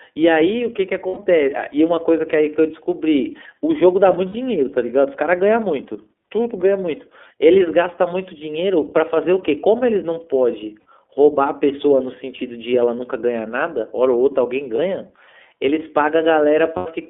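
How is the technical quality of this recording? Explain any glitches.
The speech is narrowband and plainly codec-damaged, with five brief dropouts.

iLBC codec: the band is limited to 250 Hz to 3.5 kHz, and the independently coded frames give a rough, synthetic texture, consistent with iLBC at about 13.3 kbps.

Lost iLBC frames: at 1.08, 4.29, 10.8, 14.75 and 16.76 s, lasting 90, 60, 60, 30 and 90 ms. The decoder repeats the last pitch cycle with noise, giving a held, buzzy vowel before recovering immediately.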